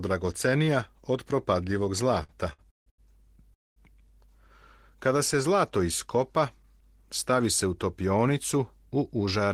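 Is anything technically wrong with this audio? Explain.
Yes, there are two faults.

From 2.23 to 3.00 s there are repeated stalls (stutter). The audio halts four times, the longest hold lasting 158 ms, with about 45% of that stretch filled in. This happens because packets arrived late, draining the jitter buffer, and the receiver stretched the last sound, so playback drags. On a spectrogram these show as smeared, flat horizontal bands; the waveform shows repeating, fading copies.

From 3.54 to 3.78 s there is a call audio freeze: 220 ms of silence, after which the sound resumes exactly where it stopped, with nothing lost. The likely cause is held-up packets emptying the buffer. On a waveform it appears as a flat line; on a spectrogram, as a blank vertical gap.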